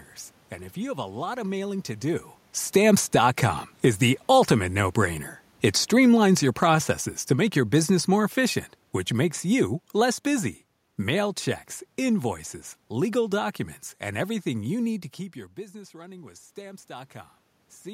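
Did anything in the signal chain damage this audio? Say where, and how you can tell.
Yes. The damage is automatic gain falling, in the call-processing stage. From 2.61 s to 15.0 s the level sinks steadily, by about 13 dB overall. The room noise sinks with the speech. That shared drop is the evidence. A talker moving, as happens around 2 s and 15 s, changes only the voice. Here the automatic gain control judged the input too loud, or its background noise too strong, and lowered its gain slowly, pulling the whole signal down.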